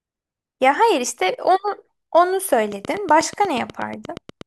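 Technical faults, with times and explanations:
2.72 to 4.42 s, train of clicks: roughly fifteen near-identical pulses tick at a regular 8.3 per second, around 5 dB louder than the speech, likely from nearby equipment interference or a faulty connection or power supply. Waveform shows evenly spaced sharp spikes; spectrogram shows thin full-height vertical lines.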